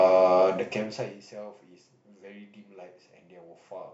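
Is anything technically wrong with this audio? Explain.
Yes. From 0.48 to 1.35 s the speech drops by roughly 25 dB with a fast ticking, zipper noise, laid over it. The level falls in 1 dB steps about 30 times a second, unsmoothed, so each jump clicks.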